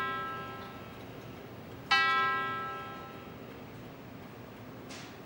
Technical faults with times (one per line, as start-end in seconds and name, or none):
0.37-4.31 clock drift buffer slips